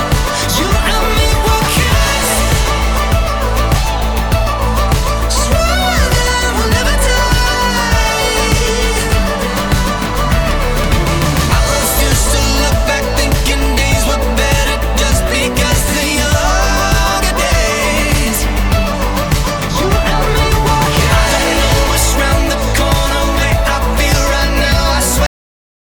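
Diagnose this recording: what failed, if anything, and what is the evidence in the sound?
The recording has a cut-off end, a failure at the storage or buffer-flush stage. At 25.26 s the audio stops abruptly in the middle of a sound and drops straight to digital silence, which holds for roughly half a second until the file ends. There is no decay or fade into that silence. The final buffers were never written to the file, so the capture closed before the last of the signal had been committed.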